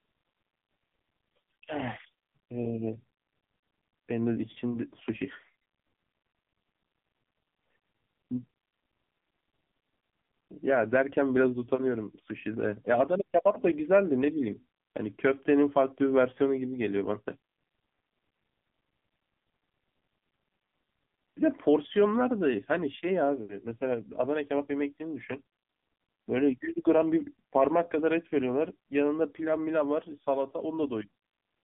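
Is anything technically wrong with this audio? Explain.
Yes. The whole clip carries AMR narrowband mobile codec damage. Nothing passes above about 3.6 kHz, and the usable band runs from roughly 150 Hz to 3.5 kHz, like a phone line. The codec models the vocal tract and drives it with a few pulses per short sub-frame. With few bits to spend, the speech turns buzzy and synthetic. The damage is heavy. The sound points to a low mobile bitrate, which fits the 6.7 kbps mode.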